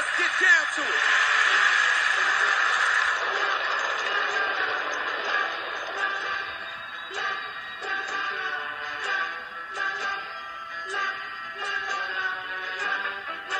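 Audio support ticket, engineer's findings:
Compressed frames skipped at 12.95 s. The audio jumps ahead by about 20 ms, which fits a single lost 20 ms frame. Probable component is the decoder or the stored file.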